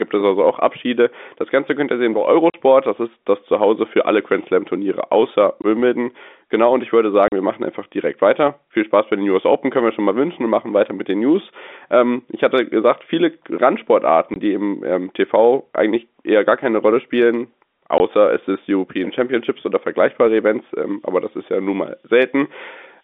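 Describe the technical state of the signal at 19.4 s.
At 19.4 s the audio is intact, with the speech carried cleanly through the narrow band of G.711 telephone coding and no fault present at that moment.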